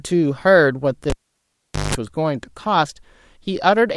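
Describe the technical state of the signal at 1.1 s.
Cable pulled and plugged in, 1.10 to 1.95 s: a live lead is yanked with a pop, leaving 0.8 s near-silence, a 0.18 s 50 Hz mains buzz as the tip touches, then a reconnect pop.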